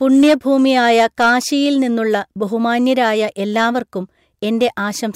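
From 0.14 to 1.33 s the speech runs into hard clipping: the level is driven about 6 dB beyond what a stage in the chain can pass, so the peaks are sliced flat. Those squared-off tops generate high harmonics, heard as a harsh fuzz riding on the louder syllables through that stretch. A second, brief instance occurs at 4.62 to 4.65 s, with an overload of about 2 dB, producing only a short crackle on the peaks.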